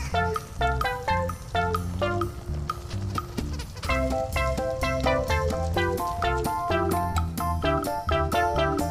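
No technical faults can be heard anywhere in the clip. The audio runs without dropouts, glitches or interruptions.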